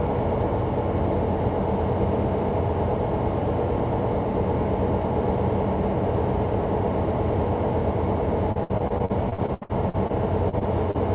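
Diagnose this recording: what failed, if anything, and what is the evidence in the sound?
Network stage, repeated packet loss (robotic sound), 8.52 to 10.11 s: over a dozen holes, the longest 72 ms, are patched by extending the preceding sound, so about 30% of that span is synthetic and it turns choppy. On a spectrogram, smeared, frozen bands repeat; the waveform shows copied cycles.

Network stage again, short concealed packet loss at 10.49 to 10.55 s, 10.59 to 10.63 s and 10.91 to 10.96 s: gaps of roughly 40, 20 and 40 ms were filled by continuation and crossfaded back, heard as brief smears. Each shows as a blurred sliver under the 4 kHz G.711 ceiling.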